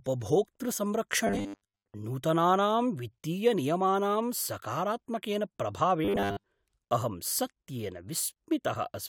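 From 1.27 to 1.95 s, before "नूतनानां वित्तीयनियमानां", the speech becomes a rigid metallic buzz at 100 Hz. It recurs from 6.05 to 6.46 s. Robotic sound from repeated short buffers is likely. A 10 ms slice keeps replaying, and most real audio is skipped.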